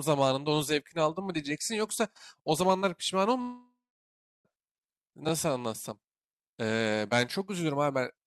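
From 3.41 s to 4.47 s the speech cuts out. The last sound is drawn out into a fading buzz, followed by about 0.71 s of near silence, and the speech resumes with 1.04 s gone. This is likely a long network dropout, with the receiver filling the gap.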